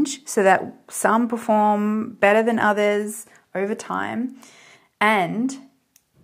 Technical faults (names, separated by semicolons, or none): none